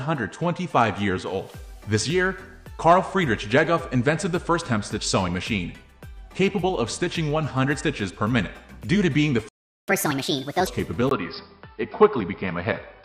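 At 9.49 s the player most likely ran out of buffered data, or its output thread was blocked, so nothing reached the output. This playback stall cuts the sound off in mid-flow and leaves about 390 ms of dead silence, lasting until 9.88 s. The sound simply stops and then resumes where it left off.

To recover the lost time, the player then worked through its backlog by resampling at 1.5 times normal speed. This catch-up at higher speed runs from 9.88 to 10.67 s. Because resampling changes pitch along with tempo, the sound there is hurried and shifted up by roughly seven semitones, a chipmunk-like lift. It then drops back to normal speed and pitch, having won back part of the lost time.

At 11.09 s the recording input was likely switched to a poorer device, such as another microphone or a headset's call profile, and that device stays in use until the end. The input switched to a poorer device passes a narrower band, so the sound turns dull and boxy, without its upper detail. 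A brief gap of about 20 ms marks the switch. The new device adds a faint noise floor, roughly 45 dB below the signal, while overall loudness stays about the same.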